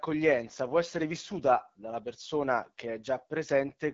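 AMR wideband (HD Voice) codec damage runs through the whole speech clip. The codec models the vocal tract and drives it with pulses, coding detail only up to 6.4 kHz. Above that, to about 7 kHz, it substitutes shaped noise, and nothing is present above 7.5 kHz. The speech comes across plainly rough and raspy, which points to one of the lowest AMR-WB rates, fitting 8.85 kbit/s, where too few bits remain to model each sound faithfully.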